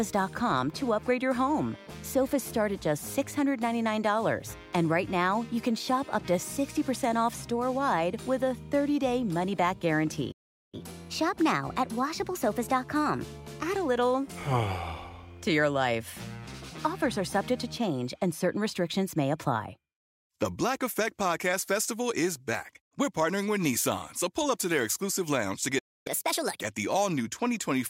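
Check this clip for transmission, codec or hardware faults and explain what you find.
Two playback stalls occur, each followed by a catch-up at higher speed.

Playback stall at 10.31 to 10.74 s (0.41 s) and 25.78 to 26.07 s (0.27 s): the sound halts mid-flow into silence, likely from the player starving for data.

Catch-up at higher speed at 10.74 to 13.74 s (1.1 times, about one and a half semitones up) and 26.07 to 26.61 s (1.5 times, about seven semitones up): the player resamples its backlog faster, raising speed and pitch together. A pure pitch fault would not also change tempo.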